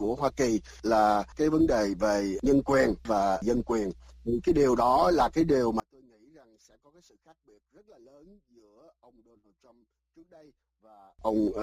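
From 5.80 s to 11.19 s the audio collapses to a faint remnant, about 32 dB down. Centred content and bass almost disappear when the channels are summed. The likely cause is one channel inverted. Reversed polarity makes the shared material cancel in mono.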